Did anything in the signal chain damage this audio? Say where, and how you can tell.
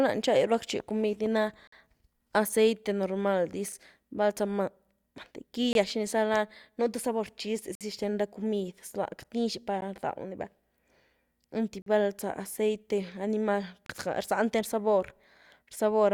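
Yes, at playback, where the streamed segments are joined. Hard-edged silent holes of 6 to 56 ms fall at 1.67, 3.72, 5.73, 7.75, 9.81, 11.82 and 13.86 s, one every 2 s, which points to 2-second segments. That is a gap between stream segments: the timestamps leave space between pieces and the player pads it with silence. Unlike a dropout, nothing is missing, since "aceite normal dis" resumes intact as "val zah".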